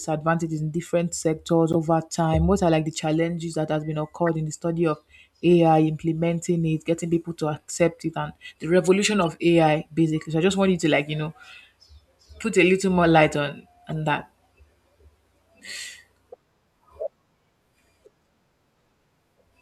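Corrupt frame decoded at 1.72–1.75 s, 4.27–4.29 s, 9.22–9.27 s and 13.89–13.92 s in this speech clip. The first falls between "in different sectors" and "over time", the third just after "it and the revolution", and the last after "little more light on". Flipped bits made the decoder misplace energy across roughly one to three frames each time, producing short chirps, squeaks, blips or bursts of noise peaking around −10 dBFS and fading to roughly −25 dBFS by the last.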